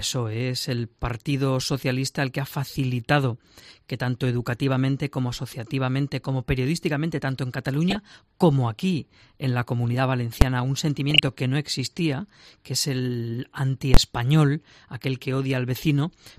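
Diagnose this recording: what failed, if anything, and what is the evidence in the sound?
DAB burbling at 7.74 to 7.97 s and 11.10 to 11.28 s. The failure is at the codec, fed by weak radio reception. Short blips of noise in single sub-bands sit over the programme. A small fraction of bits slipped past error correction, corrupting MP2 samples and scale factors so sub-bands jump in level.

Invalid numbers at full scale at 10.41 s and at 13.94 to 13.97 s. The fault is in sample-format conversion after processing. The short event is a single bang. The longer one is a loud pop at each edge with silence between. Invalid results were pinned to full scale for blocks of 256 and 1024 samples.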